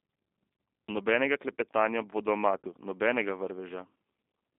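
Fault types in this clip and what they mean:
G.729 codec: The entire clip has passed through a G.729 low-rate voice coder at 8 kbit/s, which models each short frame of speech as a vocal tract filter driven by a pitch predictor plus a few sparse pulses rather than sending the waveform itself. The damage is plainly audible: the speech sounds rough and slightly synthetic, and the telephone band runs only from about 250 Hz to 3.6 kHz, so there is no low body and no air or sibilant detail above that.
VoIP packet loss concealed by the speech codec: Around 2.58 to 2.68 s, roughly 60 ms of audio went missing in transit, which fits three lost 20 ms packets. The decoder filled the gap by repeating its last pitch and filter settings at falling gain, so the speech there smears into a buzzy tone or coloured noise that fades. Because each frame builds on the previous one, the sound stays weak or distorted briefly after real packets resume.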